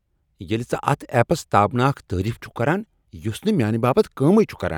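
No technical faults can be heard anywhere in the speech.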